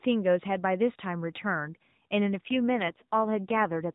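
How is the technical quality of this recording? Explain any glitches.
The recording is narrowband mobile-call speech, with nothing above 4 kHz and only light codec coloration. It has one audible fault.

AMR rate drop, from about 2.46 s to 3.84 s: the voice turns rougher, buzzier and more synthetic, then recovers. The network moved the AMR codec to a lower mode, spending bits on error protection. The sound points to a step from 12.2 to 5.9 kbps. The waveform stays continuous, and on a spectrogram the 4 kHz ceiling holds while harmonics blur and formants smear.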